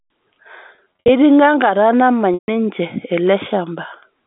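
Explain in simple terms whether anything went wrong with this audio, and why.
Two stretches suffer packet loss with pitch repetition. From 0.75 to 1.09 s, short gaps leave brief buzzy, held sounds. At 2.34 to 2.48 s, a solid 140 ms gap holds, fades to silence, then cross-fades back. A plain dropout would simply go silent without that held buzz.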